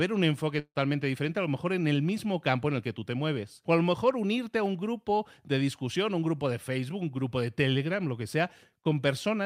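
At 0.59 s, after "un enfoque", the speech breaks for a likely long network dropout: a fading buzzy fill, then about 60 ms of flat, empty waveform before "diferente a lo mejor" resumes.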